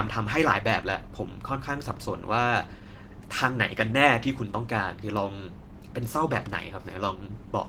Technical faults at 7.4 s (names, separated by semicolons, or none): Opus voice compression